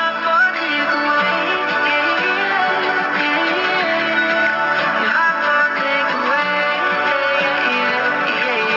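Aliasing runs through the whole clip. The audio was resampled down without a proper low-pass filter first. Content above 6 kHz folds back as false, unrelated tones. That fold point fits a drop to a 12 kHz rate. The folded energy sits roughly 25 dB below the main sound, giving sibilant, bright parts a gritty, metallic edge. The spectrum stops hard at the band edge.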